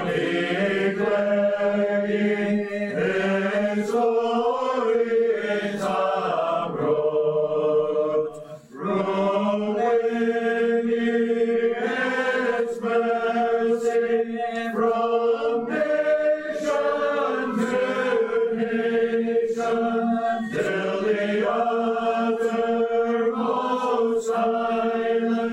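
No dropouts, clicks, distortion or level changes turn up anywhere in the recording.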